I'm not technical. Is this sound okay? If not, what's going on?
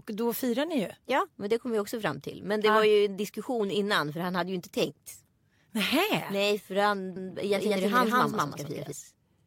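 No. From 7.16 to 8.92 s there's a doubled audio track: the speech plays twice, a second copy trailing about a fifth of a second behind at roughly the same loudness, snapping on and off abruptly. Likely a slower second recording path got mixed in.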